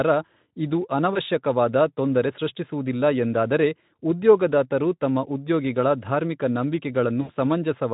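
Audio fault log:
1.13–1.20 s and 7.21–7.32 s: VoIP packet loss concealed by the speech codec. About 20 ms, then 80 ms of missing audio is extrapolated from the last pitch and filter, giving a fading buzzy or noisy smear that stays weakened briefly afterwards.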